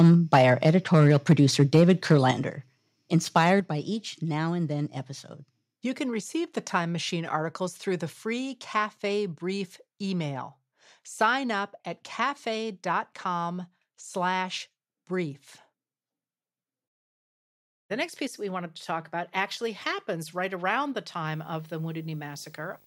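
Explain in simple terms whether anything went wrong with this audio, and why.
A few things do go wrong here, mostly in the first few seconds.

Microphone overload: From the very start to about 2.3 s, and again briefly from 3.36 to 3.5 s just before "by each now and", the loudest parts of the speech sound harsh and crackly. The tops of those peaks are getting chopped off because they're louder than the recording can hold, most likely because the microphone's input level was set too high.

Microphone volume stepped down: Right after each of those rough patches, the whole sound suddenly gets quieter in one jump, at about 2.31 s and 3.6 s. There's a third, much smaller drop at 11.52 s, just before "up at". That pattern of distortion followed by a sudden drop points to the call software likely noticing the mic was too hot and turning its input down automatically.

Video or display buzz: From about 21.27 s to the end, right after "happens right around the", a low buzz sits underneath the speech, with a hiss above it and a very high, thin whine. 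It's fairly quiet under the voice. The buzz repeats 50 times a second, matching a screen's refresh, and the whine is near 15.6 kHz, matching the rate a display draws its lines. A screen or video cable is leaking into the audio.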